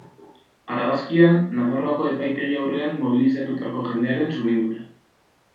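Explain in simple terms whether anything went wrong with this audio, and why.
Nothing went wrong with this audio, so there is no fault to explain.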